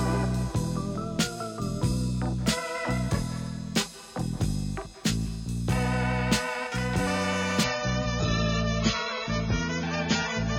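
At 7.64 s the audio drops abruptly to an adaptive stream at a lower bitrate and stays there to the end. Nothing is left above 7 kHz. The treble goes dull and codec artefacts thicken, which fits a fall from around 96 to 16 kbit/s. There is no gap.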